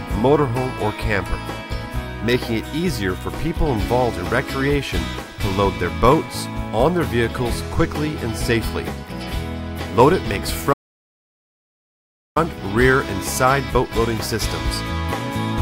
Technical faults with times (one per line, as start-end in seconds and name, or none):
10.72-12.37 playback stall